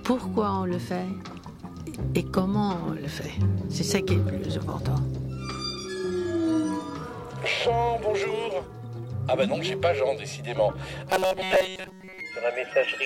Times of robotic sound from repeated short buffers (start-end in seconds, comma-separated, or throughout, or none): 11.10-12.20